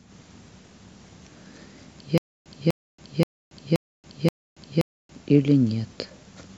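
A stream or player that likely stalled and retried gives this speech recording a stutter with silent gaps from 2.18 to 5.16 s. A 0.25 s fragment replays five times, separated by 0.28 s of digital silence, and the speech due in that span is lost.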